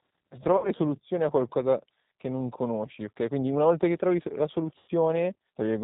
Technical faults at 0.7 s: G.729 codec; VoIP packet loss concealed by the speech codec

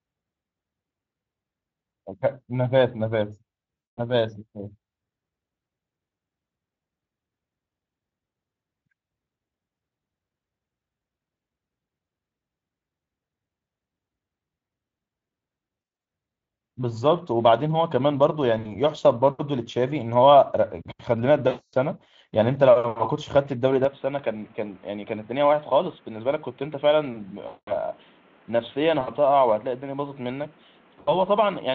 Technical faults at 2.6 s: none

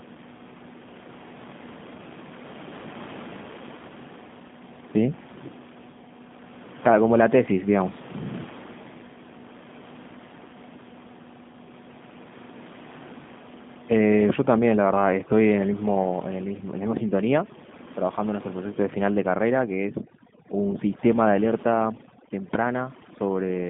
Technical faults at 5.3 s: G.729 codec

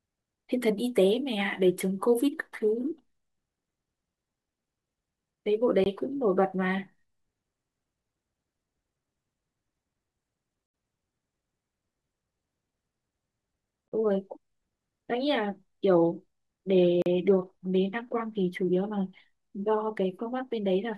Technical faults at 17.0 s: block of digital silence

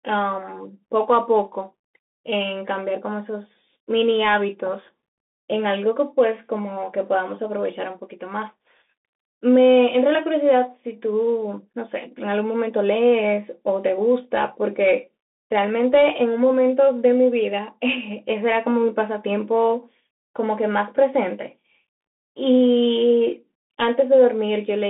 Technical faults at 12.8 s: Bluetooth CVSD headset codec

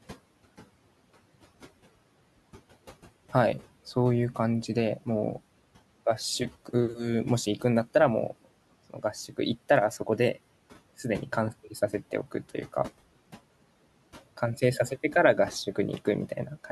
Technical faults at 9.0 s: speech cut by the noise suppressor

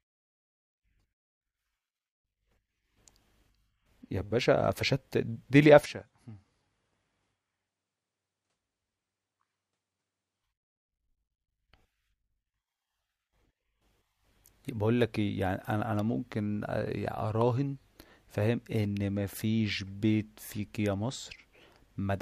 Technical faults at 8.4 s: input switched to a poorer device

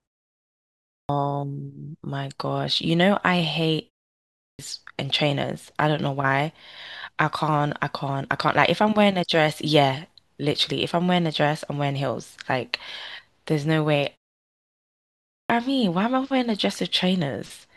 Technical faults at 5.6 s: none

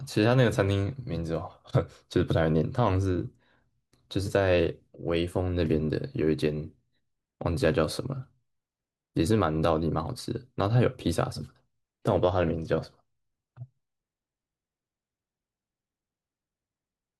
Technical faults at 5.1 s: none

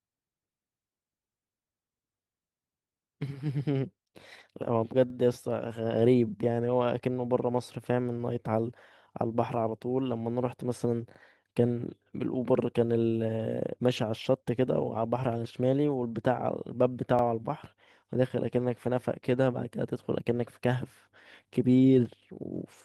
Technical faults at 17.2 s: overlapping chunks

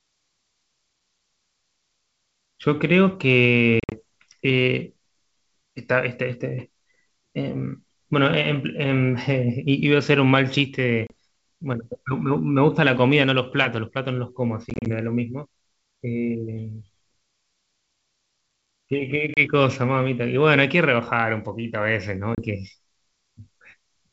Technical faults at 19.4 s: packet loss on an ADPCM call

